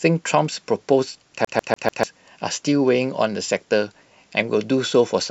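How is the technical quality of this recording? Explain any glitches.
The recording has one clear glitch, a skipping-CD stutter in the speech. From 1.45 s to 2.03 s it behaves like a CD stuck on one turn: a scratch keeps sending the laser back to the same point, so a 147 ms slice of audio plays four times in a row, each pass ending in a brief mute. It is heard as a fast, mechanical stutter. On a spectrogram or waveform, identical blocks repeat side by side, separated by thin silent gaps.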